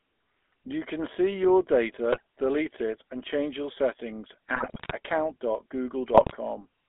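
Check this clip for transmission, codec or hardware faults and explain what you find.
Two faults: the speech passed through a GSM full-rate codec for the whole clip, and GSM bit errors corrupted it three times.

Throughout, the GSM full-rate codec rebuilds the voice from a vocal-tract filter excited by sparse, regularly spaced pulses, consistent with 13 kbps coding, and the line passes only 250 Hz to 3.5 kHz. The result is a plainly buzzy, gravelly roughness with no top end.

GSM bit errors occur from 2.10 to 2.20 s, between "can see your" and "delete it and change", from 4.54 to 4.92 s, just after "and change your settings", and from 6.14 to 6.37 s. Flipped bits corrupt the decoder's filter, pitch and gain values, so the speech breaks into squawks, pops and gargling. The second burst lasts longest.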